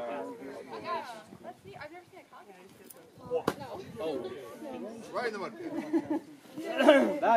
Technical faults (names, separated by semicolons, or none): none